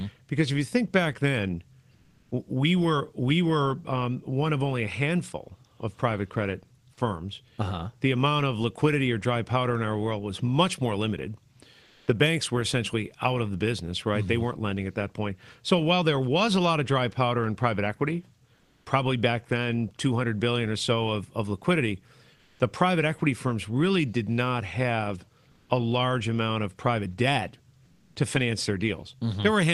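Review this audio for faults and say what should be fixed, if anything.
The sender most likely stopped transmitting during speech pauses (Opus discontinuous transmission), so the receiver filled each gap with comfort noise in place of the background. At 1.93–2.29, 11.83–12.07, 18.55–18.85, 22.39–22.57, 25.51–25.69 and 27.85–28.15 s, the quiet room tone, sitting about 33 to 38 dB below the loudest speech, turns into a flat, featureless hiss. The hiss stays level in some gaps and drops by about 4 to 5 dB at 18.55 and 25.51 s. The speech itself comes through the Opus call path band-limited at 12 kHz. To prevent this, disable DTX on the sending encoder.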